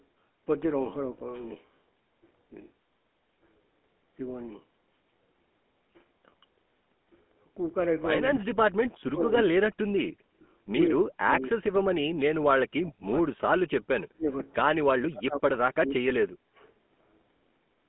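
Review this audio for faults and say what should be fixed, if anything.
The speech went through the GSM full-rate codec, which rebuilds the voice from a vocal-tract model fed by a sparse, regularly spaced pulse excitation, which fits a 13 kbps full-rate stream. The result is a plainly audible buzzy, gravelly roughness for the whole clip, and nothing above 3.8 kHz survives, so sibilants and consonant detail are dull. Use a wideband codec such as AMR-WB or Opus end to end instead of GSM full rate.

Speech suppressed in double talk occurs five times: 8.21 to 8.45 s, 8.78 to 10.07 s, 10.86 to 11.64 s, 12.67 to 13.85 s, and 14.08 to 14.28 s. The likely cause is an echo canceller that could not tell this talker from loudspeaker echo while the far side spoke, so it pulled the voice down. The first dip is about 25 dB deep. The rest reach about 40 dB. Tune the canceller's double-talk detector so near-end speech is passed rather than attenuated.

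An echo leak appears from 10.41 to 10.48 s as a brief scrap of the voice repeated about 110 ms late, faint at about 35 dB below the speech. Its likely cause is a loudspeaker-side echo canceller that did not fully remove what its microphone picked up, letting a residual copy return down the line. Improve the far end's acoustic echo cancellation, or have that side use a headset.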